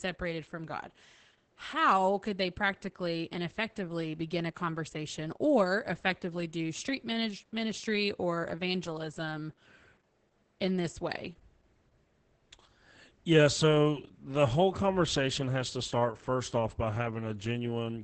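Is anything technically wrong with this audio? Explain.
Yes. Throughout, the speech carries heavy Opus voice compression: a low-rate SILK-style linear-prediction coder, consistent with about 10 kbps, limits the band to 8 kHz and codes the excitation coarsely. The result is muffled, hoarse and faintly robotic, unlike plain low-pass filtering, which dulls without that rasp.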